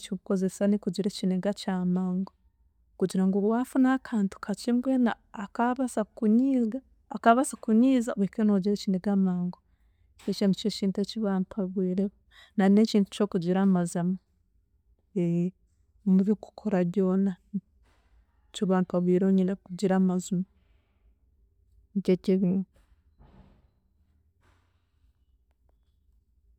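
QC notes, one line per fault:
13.18 s, corrupt frame decoded: a single damaged compressed frame was played as though valid, so misread codes and gains dropped energy into the wrong frequency bands for that frame's length, giving a brief glitch over the speech. The error is quiet, peaking around -50 dBFS. On a spectrogram it shows as a thin vertical smear of misplaced energy one frame wide, out of step with the surrounding harmonics. The waveform barely changes at that level.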